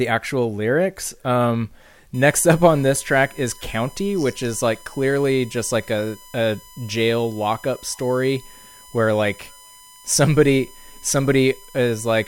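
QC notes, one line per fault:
2.14 to 12.28 s, USB whine: right after "actual lyrics um" a steady 1 kHz whine sits under the speech till the end, roughly 25 dB down. That pitch matches the bus's 1 ms frame rate, so current pulses from USB traffic are leaking in through power or ground.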